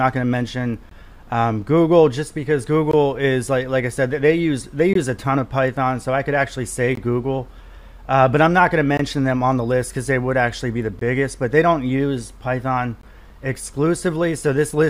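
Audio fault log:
0.89–0.91, 2.91–2.93, 4.93–4.95, 6.95–6.97, 8.97–8.99, 10.99–11.01, 13.01–13.03 s: gap between chunks. 20 ms silences recur every 2 s. Silence sits between the chunks, interrupting the sound at every join.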